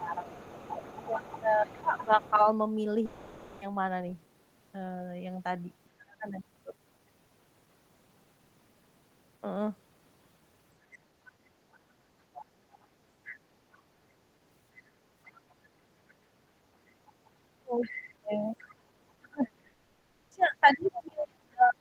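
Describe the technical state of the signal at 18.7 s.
At 18.7 s the talker's speech is pushed down, part of a suppressed stretch running from 17.61 s to the end of the clip, with the deepest dips reaching around 35 dB. This is speech suppressed in double talk. The likely cause is an echo canceller that, with both ends talking at once, could not tell the local voice from loudspeaker echo and attenuated everything. Unlike a network dropout, the dips come from the echo canceller's processing rather than from lost packets.

At the same moment a second, fainter voice sits underneath, the other side's voice leaking through between 17.81 and 18.74 s, so it ends just after the point asked about. It runs around 20 dB below the talker. It was likely the far end's loudspeaker playback reaching the microphone and surviving the echo canceller. Unlike crosstalk from a wiring fault, it is a separate voice that arrives only when the other side speaks.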